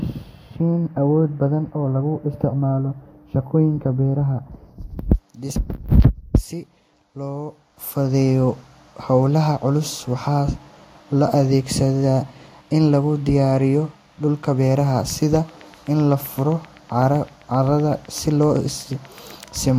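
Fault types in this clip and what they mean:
Train of clicks: A steady ticking runs through the last part of the speech, from 15.1 s to 19.69 s. The clicks arrive at an even pace of about 7.85 per second, some forty in all. Each one has much the same sharp shape. They peak at roughly the level of the speech itself. The likely cause is interference from nearby equipment or a faulty connection or power supply.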